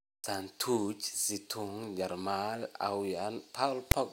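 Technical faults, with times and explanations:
3.91 s, file tags played as audio: near the very end of the speech, a block of metadata text is read by the player as if it were sample data. The character codes become a brief, loud rasp whose waveform sits offset to one side of zero, since text bytes cluster in a narrow range of values. Zero padding in the block decodes as dead silence, and the burst starts and stops with hard edges rather than fading.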